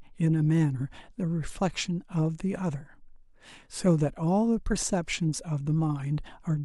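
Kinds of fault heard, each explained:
No kind of fault can be heard anywhere in this speech recording. There is nothing to name or explain.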